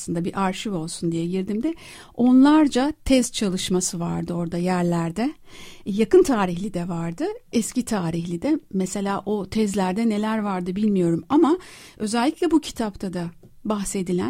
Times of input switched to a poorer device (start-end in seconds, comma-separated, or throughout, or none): none